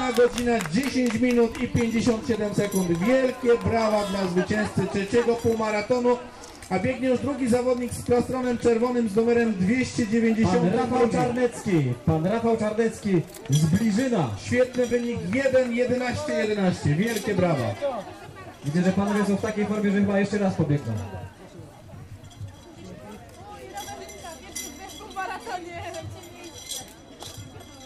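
No technical fault can be heard anywhere in this audio. Nothing in it calls for a time or a cause to be given.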